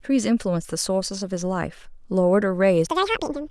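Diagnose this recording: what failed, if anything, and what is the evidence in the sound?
A sample-format conversion fault: from 2.87 s to the end at 3.50 s the speech is audio read two samples at a time (double speed). Playback runs at 2.0x and jumps an octave higher. The reader took each pair of samples as a single frame, as if it assumed two channels or samples twice as wide, so it consumed the data twice as fast as intended.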